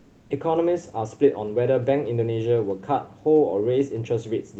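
From 0.01 to 0.25 s, the room background is replaced by comfort noise: a steady, featureless hiss about 4 dB quieter than the real background that follows. The likely cause is Opus discontinuous transmission, with the receiver synthesising noise to fill the 240 ms pause.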